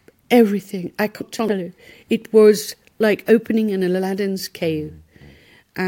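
At 1.21 s, just after "everything I", chunks arrive out of order until 1.49 s: a 93 ms chunk plays two chunks late, jumbling that stretch. The waveform shows three hard joins, and the spectrogram shows formant tracks breaking abruptly at each.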